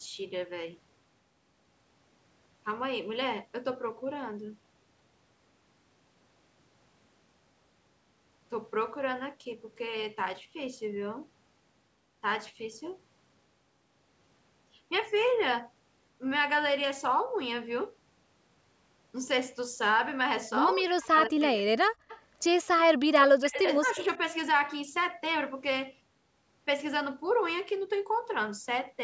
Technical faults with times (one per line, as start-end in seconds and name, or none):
20.77-21.73 speech suppressed in double talk
22.08-22.22 echo leak
23.12-23.99 speech suppressed in double talk
23.96-24.03 echo leak